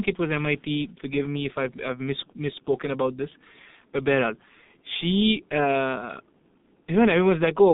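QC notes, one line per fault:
Throughout: G.723.1 codec, heavy damage; nothing above 3.8 kHz, line band about 150 Hz to 3.7 kHz, muffled hoarse speech and smeared consonants, consistent with a 6.3 kbit/s stream.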